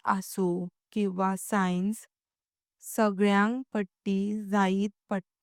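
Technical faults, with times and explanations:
Nothing faulty can be heard in this speech recording. There is no event here that needs a time or an explanation.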